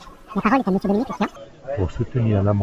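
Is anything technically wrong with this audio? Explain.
Yes. From the start to 1.36 s the speech has a wrong sample rate fault: it runs at twice normal speed and sits a full octave (12 semitones) too high, sounding chipmunk-like and rushed. The samples are being played back without conversion at double the rate they were captured at, which fits 16 kHz audio being played at 32 kHz. On a spectrogram, harmonics and formants appear stretched upward by a factor of two, with syllables squeezed to half their usual duration.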